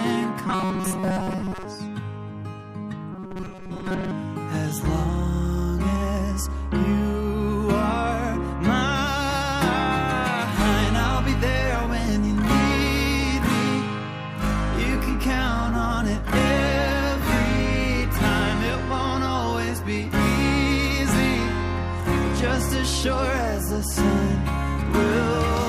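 At 0.47–1.65 s and 3.13–4.13 s, delayed audio was likely patched by looping buffers of about 5 ms, causing robotic sound from repeated short buffers: a rigid, metallic 188 Hz buzz.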